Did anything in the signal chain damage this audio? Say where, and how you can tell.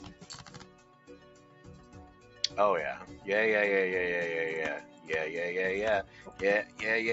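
Yes. A noise suppressor was applied to music or sounds throughout. The call-processing stage uses a speech noise suppressor, which treats steady, non-speech sound as noise. Its gain rides up and down by roughly 10 dB, so the sound pumps and thins instead of holding level.

The noise suppressor cuts sound from 0.43 to 2.47 s (about 9 dB down), 4.84 to 5.09 s (about 7 dB) and 6.04 to 6.4 s (about 8 dB). In these stretches the sustained or decaying sound sinks and its tail is cut short.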